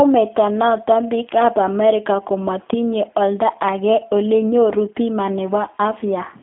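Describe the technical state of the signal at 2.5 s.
At 2.5 s the speech carries G.729 codec damage, present from start to finish rather than as a local event. The audio is plainly rebuilt from a vocal tract filter, a pitch predictor and sparse pulse excitation, so it sounds rough and synthetic, consistent with a low-rate coder around 8 kbit/s. It sits in a telephone band of 250 Hz to 3.5 kHz, with nothing above 3.6 kHz.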